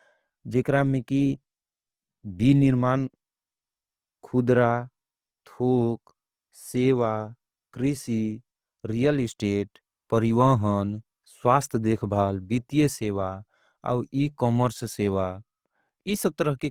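From start to end the speech sounds grainy and rough, its upper bands filled with noise rather than left hollow, so it lacks the swirling of MP3. This is likely Opus compression in music mode, consistent with 24 kbps, still reaching 20.2 kHz.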